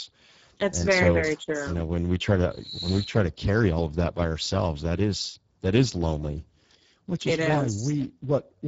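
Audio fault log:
Throughout, Speex codec: the speech has a hoarse, grainy roughness that is plainly audible and stays steady across the clip rather than coming and going. At a rate which fits about 10 kbps, the CELP coder has too few bits for the excitation, so the voicing turns hoarse and noisy. Nothing is heard above 7.7 kHz, and the upper band sounds like shaped hiss rather than real detail. That noise-filled top and the hoarseness are what set it apart from a plain low-pass or MP3-style swirl.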